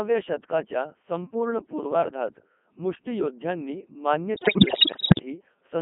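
From the first moment the speech sounds robotic and buzzy, squeezed into a narrow 200 Hz to 3.4 kHz band, with the damage heavy throughout. This is the Codec 2 vocoder at work. The sound fits its 3.2 kbit/s mode, which sends only pitch, voicing, energy and a coarse spectral envelope. The decoder rebuilds the voice from sine waves, so the original waveform never arrives and everything comes back synthetic.

From 4.37 to 5.22 s, right after "शतकाच्या संपूर्ण पूर्वार्धात मुष्टीयोद्ध्यांनी", the speech breaks into bleeps, warbles and garbled robotic babble, jumping in pitch, loudness and tone colour. These are bit errors on digital voice radio, at a high rate of something like one bit in seven. With so few bits per frame, each flipped bit corrupts the pitch, level, voicing or spectrum of a whole frame. Frame after frame is resynthesised from wrong parameters.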